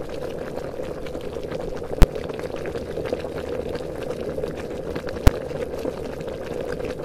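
Two sharp bangs cut through the audio, one at 2.02 s lasting about 12 ms and a shorter one at 5.27 s of about 6 ms. Both are invalid numbers at full scale: a calculation produced infinite or invalid values, and the output was pinned at the largest possible value for a whole processing block. The first fits a 512-sample block and the second a 256-sample block, too brief to hear as separate pops at each edge.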